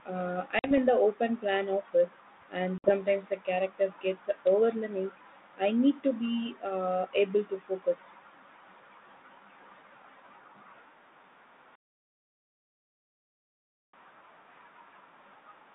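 At 0.59 s and again at 2.78 s, packet loss on an ADPCM call cuts about 50 ms and then 60 ms of speech to silence, consistent with a handful of packets lost each time. On the waveform each gap is a flat, hard-edged hole, and the spectrogram shows a clean vertical blank across the 150 Hz to 3.7 kHz telephone band. When the audio resumes, the decoder's predictor and step size no longer match the sender's, so the speech returns slightly distorted, settling by 0.79 s and 2.92 s.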